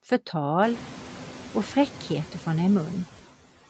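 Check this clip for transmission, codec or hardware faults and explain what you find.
One processing fault runs through the whole clip: noise suppressor artifacts. The speech is band-limited, with nothing above 8 kHz, which fits a wideband call path.

Noise suppressor artifacts (throughout): The room noise climbs by about 21 dB around half a second in, and then sits about 18 dB below the speech. The suppressor estimates that steady noise and pulls down each frequency band it judges to be noise, frame by frame, by about 7 dB. Between phrases the background therefore dips, and under the speech it swells back. A noise gate would instead cut the background abruptly to near silence and snap it back on whole. Here the reduction is partial and moves band by band, rather than in clean on-off steps.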